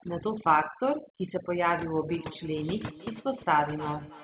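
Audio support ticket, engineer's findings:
Overdone noise removal, whole clip. Background pulled to near silence with twinkling specks. Noise suppressor set too aggressive, dropping individual bands near its noise estimate and taking quiet speech detail with them. Unlike the band limit at 4 kHz, which fits the G.711 mu-law call path at 64 kbps, the loss here flickers over time instead of sitting as a fixed ceiling.

Feedback echo between two devices, 2.09 s to end. Discrete repeats of the speech at roughly a third of a second, each thinner and more ringing, loudest about 18 dB below the direct speech. Two devices in one room on the same call: one plays the other's audio, and that microphone picks it up again, beyond either echo canceller's reach. Fixed spacing separates it from room reverb.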